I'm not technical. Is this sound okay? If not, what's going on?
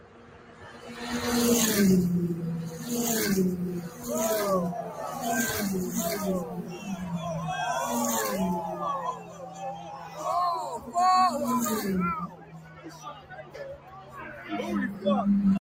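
No, not quite. A noise suppressor applied to music or sounds is running on the whole clip. It's a tool built to clean up speech, and here it keeps mistaking steady, held sound and lingering tails for background noise, so it pulls them down. Quick hits get through, but anything sustained keeps sinking and coming back. The level swings by a fair amount the whole way through, which gives the clip a pumping, thinned-out feel.

On top of that, there are specific spots where sound is cut by the noise suppressor, meaning it ducked one part harder than the rest. The big ones are the opening second (0 to 1.03 s), about a second at 9.13 to 10.25 s, and the longest, around two seconds from 12.27 to 14.5 s. Shorter dips hit at 3.85 to 4.07 s, 4.84 to 4.99 s, 6.45 to 6.88 s and 10.74 to 10.93 s. In each of these, the sound briefly drops away or its fade gets chopped short.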